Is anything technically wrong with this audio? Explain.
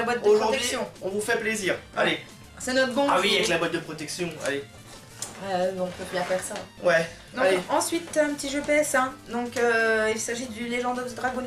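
No, nothing is technically wrong with this audio.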